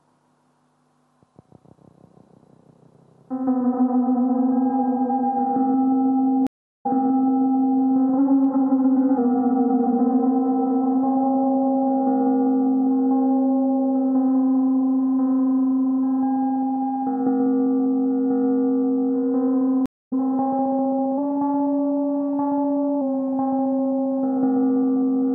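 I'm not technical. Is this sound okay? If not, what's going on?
No, there are two kinds of problem here, each happening twice.

The first is a stream reconnect, at 6.47 to 7.83 s and again at 19.86 to 20.13 s. The connection dropped, so the sound goes silent for about 0.37 s the first time and about a quarter of a second the second time. Then playback picks back up at a different spot. The first time it jumps back about a second, so you hear a bit repeated. The second time it skips ahead by roughly a fifth of a second, so a little is lost.

The second is a drift correction step, at 8.18 to 9.18 s and 21.18 to 23.01 s. For those stretches everything plays about 6.3% faster and about a semitone higher, then snaps back to normal. It sounds like someone briefly nudged the tape speed. The likely cause is software keeping two clocks in sync by jumping the playback rate in one go, instead of easing it gradually.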